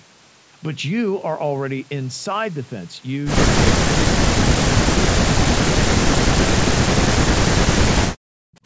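Speech suppressed in double talk, likely from an echo canceller unable to separate the talker from loudspeaker echo, cuts the speech by up to about 40 dB at 3.76–4.43 s, 5.14–5.79 s and 5.97–8.57 s.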